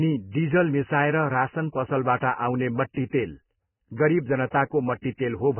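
From start to finish the speech carries heavy damage of the kind left by Vorbis compression, likely at a very low bitrate in the region of 10 kbps. Nothing is present above about 3 kHz, so the top end is cut away and the voice sounds dull and boxed in. Below that cut-off, detail that the encoder could not afford has been replaced by noise of similar energy, giving a hissy, grainy texture, rough tonal edges and smeared consonant onsets.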